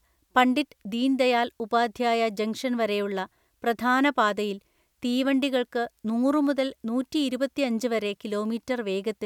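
No technical faults can be heard in this recording.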